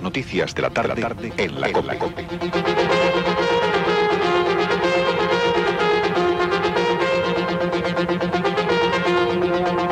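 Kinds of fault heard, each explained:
Doubled audio track: The sound was likely picked up a second time through a slower path, so the same material is mixed in twice with a fixed offset. From 0.77 s to 3.11 s, a full-band copy trails the original by roughly a third of a second, sitting about 5 dB quieter. It carries no decay or room colour, reads as a clean, hard echo rather than reverberation, and cuts in and out abruptly at those boundaries.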